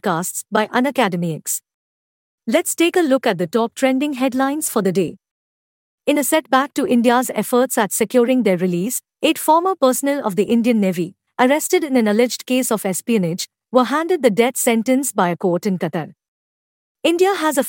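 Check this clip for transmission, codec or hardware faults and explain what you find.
Nothing in the speech points to a fault anywhere in the chain that carried it. No moment in the recording stands out as a problem.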